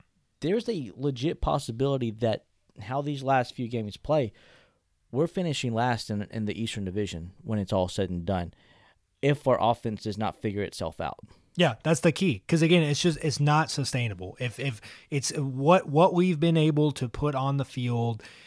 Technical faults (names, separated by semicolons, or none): none